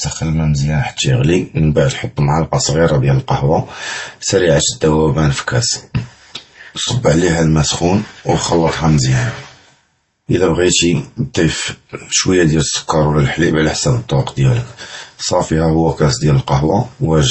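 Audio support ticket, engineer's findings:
Transcoding between lossy codecs, whole clip: dull, nothing above 8.1 kHz, smeared swishy artefacts layered on a grainy edge. Likely an MP3 pass, then Opus, both sounding around 32 kbit/s, each adding its own damage on top of the last.

Channel delay (comb filtering), 0.0 to 1.0 s: hollow, phasey speech with fixed notches, first around 400 Hz. Points to one channel lagging roughly a millisecond and a half, then summed to mono so shared content cancels.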